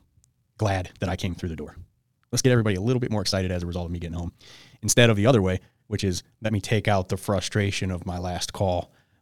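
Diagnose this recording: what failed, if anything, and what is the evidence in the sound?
A likely time-stretch step in post-processing software squeezed the opening to fit a length, giving a time-stretched section from 0.0 to 6.62 s that runs about 1.56 times faster. The speech sounds rushed with pitch unchanged, then the pace shifts abruptly at 6.62 s.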